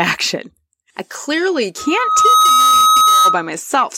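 From 1.78 s, just after "I clearly", a pure tone near 1.3 kHz swells over roughly 0.7 s into a squeal a little louder than the speech, lasting until 3.46 s. This is loudspeaker feedback squeal: the microphone re-amplified its own loudspeaker until that frequency ran away.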